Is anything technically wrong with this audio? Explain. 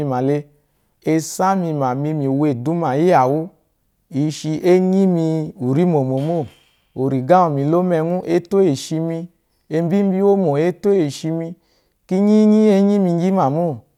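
No, nothing technically wrong turns up in this speech recording on listening; no faults are present.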